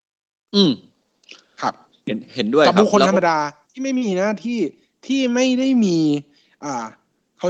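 No technical faults can be heard in this speech, which comes through an Opus call path with its usual coding character and a top end that stops around 12 kHz.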